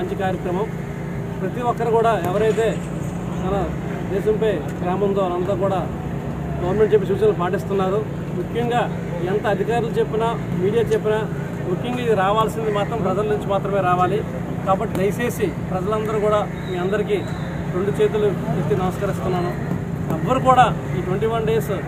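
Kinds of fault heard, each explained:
No audible faults in this clip.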